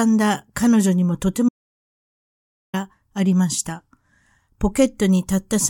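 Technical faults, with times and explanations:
1.49 to 2.74 s, audio dropout to silence: the speech cuts off mid-flow and the track goes to dead silence for about 1.25 s, with no room tone or background hiss underneath, before the voice snaps straight back in. That flat silence most likely means the input went missing, say a loose connection, a dropped wireless link or an accidental mute, while the recorder kept writing. Whatever was said in that stretch is simply gone.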